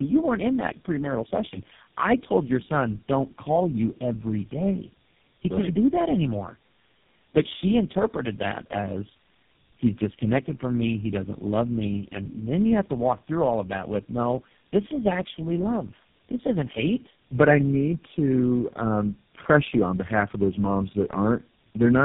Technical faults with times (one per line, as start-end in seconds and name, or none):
0.00-22.05 tandem speech coding